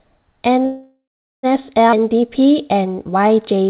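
From 0.65 to 1.46 s, a call audio freeze, likely from packets held up in transit, empties the jitter buffer; the last sound is stretched into a fading fill, silent for about 0.44 s, before the speech resumes.

At 1.91 to 1.95 s, a skip ahead drops about a third of a second of waiting audio; playback jumps forward with only a tiny 12 ms join.

From 1.97 to 3.64 s, a jitter buffer slow-down repeats pitch periods to rebuild its reserve, adding 108 ms. The speech runs at 94% speed without changing pitch, and sounds drawn out.

Throughout, the G.711 mu-law call path keeps everything below 4 kHz.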